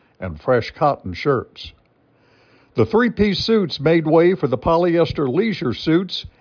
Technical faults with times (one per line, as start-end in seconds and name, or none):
none